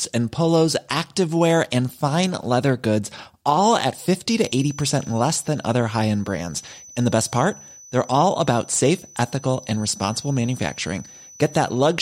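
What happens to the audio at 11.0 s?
A feedback whistle near 6 kHz runs from 4.30 s to the end, likely a speaker-microphone loop held at threshold: a thin tone at one pitch that swells and fades slowly but never builds into runaway howl.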